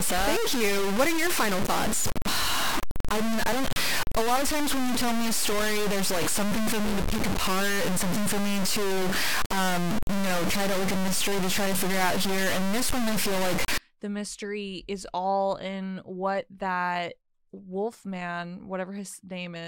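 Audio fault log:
0.00–13.78 s, low bit depth without dither: the speech turns coarsely gritty, with distortion about as loud as the speech itself that tracks the voice and sputters on quiet parts. This likely comes from undithered truncation to about 3 bits. Dithered reduction would instead leave a steady hiss.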